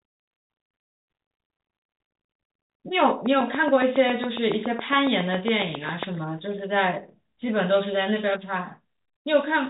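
It's telephone-band speech, topping out around 3.8 kHz, and from 3.26 to 6.04 s there's a train of clicks: about twenty regular ticks at 7.2 per second, peaking roughly 10 dB above the speech, likely interference from nearby equipment.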